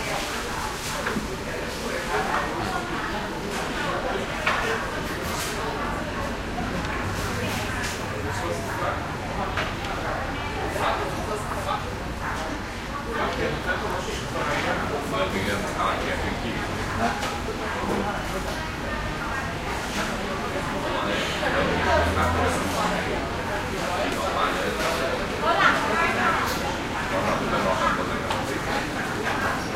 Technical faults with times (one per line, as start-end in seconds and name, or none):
none